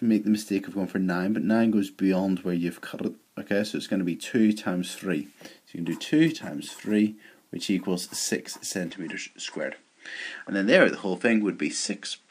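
At about 8.91 s the sound abruptly loses its top end and stays that way to the end: nothing above 9.5 kHz gets through, so it turns a bit dull and boxy. The likely cause is the input switched to a poorer device mid-recording, a different mic or a headset's call mode with a narrower band. There's no gap at the switch and the level holds about steady, but a faint new noise floor appears, roughly 45 dB down.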